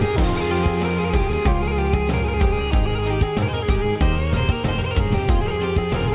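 No technical faults are audible.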